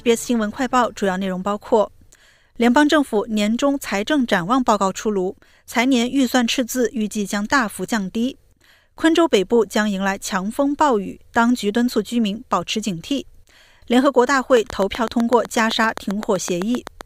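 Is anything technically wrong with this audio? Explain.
Yes, there is a train of clicks from 14.57 to 17.02 s: about twenty evenly spaced pops at roughly 7.8 per second, peaking around 10 dB above the audio. This is likely interference or a faulty connection or power supply. It shows as regular vertical spikes on the waveform and thin full-band stripes on a spectrogram.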